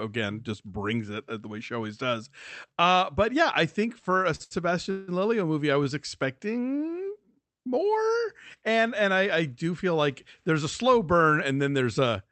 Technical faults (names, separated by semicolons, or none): short stall from a late packet; call audio freeze